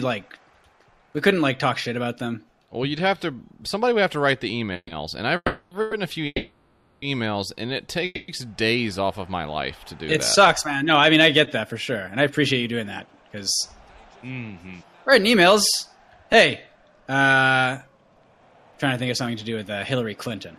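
Between 4.73 and 5.94 s the audio drags and catches three times, each catch holding the previous sound for a moment before it moves on. This is repeated stalls (stutter): packets reached the receiver late or too slowly, so its jitter buffer kept running dry and the last sound was extended to cover each wait. The three gaps add up to 260 ms, the longest 130 ms, about a fifth of that stretch. Nothing appears to be lost, only delayed.

Inside that span, from 5.36 to 5.73 s, the sound stops moving and is drawn out as a fading tone for 350 ms, sinking into about 40 ms of silence before the audio resumes where it left off. It happens again from 6.26 to 7.04 s (760 ms, ending in about 20 ms of silence) and from 8.05 to 8.30 s (230 ms, about 10 ms of silence). These are call audio freezes, likely caused by packets held up in transit until the buffer emptied, with the receiver stretching the last sound until delivery restarted. 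Each one inserts a pause rather than cutting anything out.

From 10.64 to 13.31 s the audio sounds hurried, running at about 106% speed while the pitch stays the same. This is a jitter buffer speed-up: with too much audio queued after the earlier delays, the receiver trimmed many short pitch-period-length pieces, around 150 ms in total, to bring latency back down.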